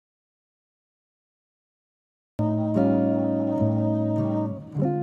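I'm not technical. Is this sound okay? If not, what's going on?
No. The clip opens with an audio dropout to silence. From the start until 2.39 seconds there is nothing at all, not even background hiss. Then the sound cuts in mid-flow. The input was likely lost, so that stretch is gone.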